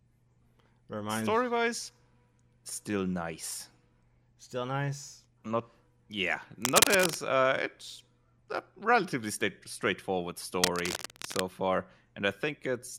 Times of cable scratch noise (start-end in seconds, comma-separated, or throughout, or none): 6.62-7.16, 10.59-11.41